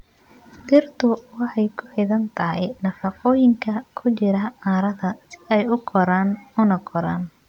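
At 0.75 to 0.78 s the speech runs into hard clipping. For about 28 ms the waveform goes past the ceiling of one stage in the chain, and its peaks are cut flat. The overload is only about 1 dB, so this is a brief crackle on that loud moment, not a sustained fuzz. The flat-topped peaks add sharp upper harmonics, which is what separates it from soft saturation, whose rounded peaks add a warmer, duller thickening.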